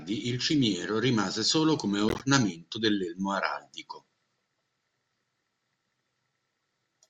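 A speech recording with plainly audible codec damage throughout. The sound turns watery and swirly, with smeared consonant attacks. This is likely MP3 compression, and the degree of damage fits a low bitrate around 64 kbps. From 2.09 to 2.21 s, between "cimiero rimase solo come" and "dell'elmo araldico", a corrupt frame was decoded. Misplaced energy peaks near -15 dBFS. It spans a handful of damaged frames, whose flipped bits sent energy to the wrong frequencies.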